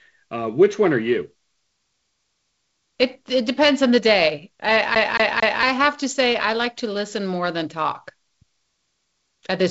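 From 4.95 s to 5.63 s the speech falls into a CD stuck on one turn: the same 0.23 s fragment plays three times, each pass ending in a brief mute as the laser jumps back a track at the scratch. What separates this from a network or buffer repeat is its rigid evenness. The loop length never varies, the fragment is identical each time, and the dropouts land at exactly the same spot, giving the mechanical, metronomic stutter of a skipping disc over the band-limited G.722 telephone sound.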